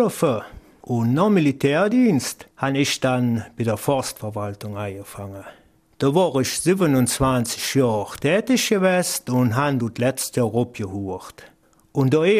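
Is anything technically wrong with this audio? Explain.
No, nothing technically wrong can be heard here.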